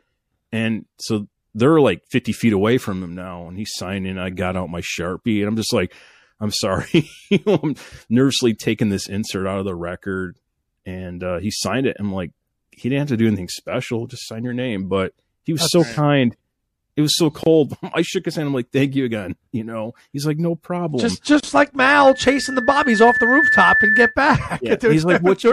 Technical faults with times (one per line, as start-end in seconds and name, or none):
0.00-25.53 MP3 compression
17.43-17.46 gap at a join of encoded pieces
21.40-21.43 gap at a join of encoded pieces
21.78-24.16 loudspeaker feedback squeal